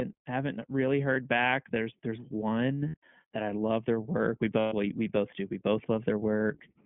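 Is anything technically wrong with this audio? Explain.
Yes. The whole clip of speech carries iLBC codec coloring: a narrowband line of about 150 Hz to 3.4 kHz, with plainly audible roughness and a synthetic edge, which fits iLBC's 15.2 kbps mode with 20 ms frames. That grainy texture separates it from simple telephone band-limiting.

There are three bursts of lost iLBC frames. The first runs from 1.14 to 1.17 s, about 20 ms, right after "haven't really". The second runs from 2.88 to 2.97 s, about 60 ms, between "there's one" and "that I love their". The third runs from 4.60 to 4.74 s, about 120 ms, just before "we both do". The lengths fit one, three and six missing 20 ms frames. The decoder repeats the last pitch cycle mixed with noise, so each gap sounds like a held, buzzy or breathy vowel rather than silence. The voice recovers almost at once, unlike a plain dropout.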